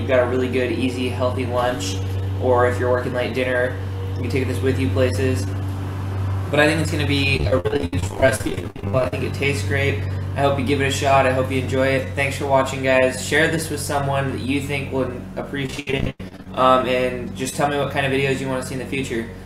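Repeated packet loss (robotic sound) hits from 7.36 to 9.13 s and again from 15.66 to 16.47 s: 48 and then 15 short dropouts, each patched by extending the previous sound, so about half of each stretch turns choppy.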